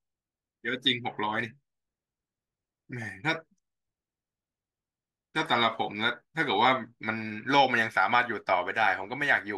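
Nothing in this speech recording calls for attention; there's simply no technical fault to point to anywhere in it.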